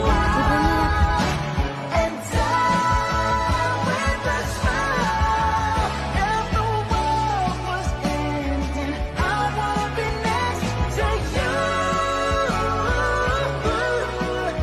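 At 10.08 s and again at 11.22 s you get compressed frames skipped: whole frames never got decoded, so the audio lurches forward, about three frames (around 70 ms) first, then roughly one.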